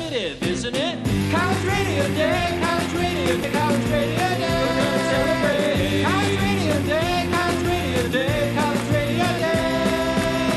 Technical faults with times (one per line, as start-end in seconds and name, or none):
3.44-3.47 damaged data in a compressed stream